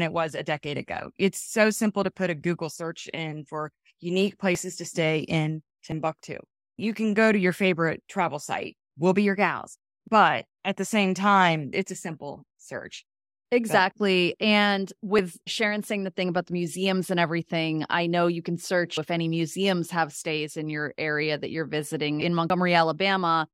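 Speech with six abrupt jumps, at 1.42, 4.55, 5.92, 10.08, 15.19 and 22.5 s, where the sound skips forward without any gap of silence. Most skips lose around 20 ms, while those at 10.08 and 22.5 s drop closer to 50 ms. The likely cause is a dropped buffer (overrun): recorded samples were overwritten before being read, and the audio on either side was spliced together directly.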